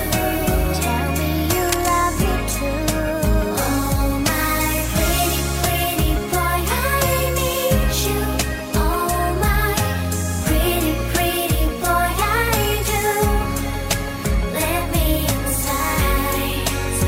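A burst of cable scratch noise from 1.69 to 1.89 s, nearly as loud as the sound, likely a worn connector being moved; it's dense and uneven, unlike a single click.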